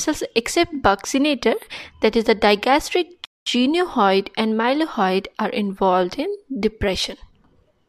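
At 3.25 s the sound drops abruptly into silence, then picks up again at 3.46 s exactly where it left off, with nothing skipped. This is a rebuffering stall: playback exhausted its downloaded audio and paused until more arrived, adding about 211 ms.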